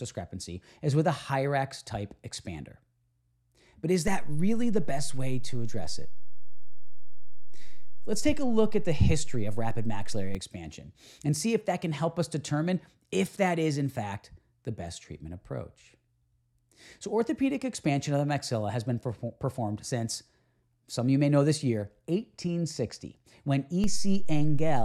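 At 4.08 s, just before "expansion and see if", the zero line of this speech jumps by about -23 dBFS in a DC step. The offset lasts until 10.35 s. A second step of about -20 dBFS arrives at 23.84 s and stays to the end. Each jump is a low thump or click while the speech runs on unbroken. That is what sets it apart from a dropout or an edit click, which break or damage the sound itself.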